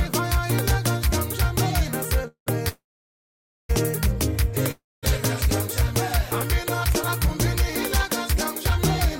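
Call audio freezes at 2.27 to 2.48 s, 2.68 to 3.71 s and 4.71 to 5.05 s: the sound smears into a fading buzz, then silence, likely from late packets draining the jitter buffer. Unlike packet loss, nothing is skipped; the audio resumes where it stopped.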